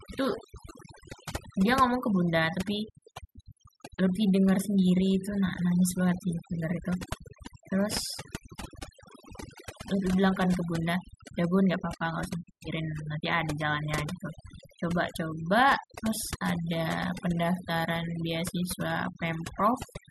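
From the first second to the last, the speech has been through overdone noise removal. The noise reducer was pushed far too hard, so any frequency band sitting close to its idea of the noise floor gets pulled right down or shut off, and the softer parts of the voice get swept away with the noise. You hear it as a background gone almost dead, with little twinkling specks.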